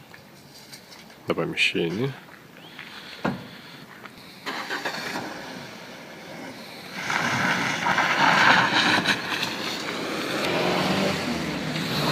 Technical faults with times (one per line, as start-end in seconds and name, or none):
1.29 damaged data in a compressed stream
4.17 damaged data in a compressed stream
10.45 damaged data in a compressed stream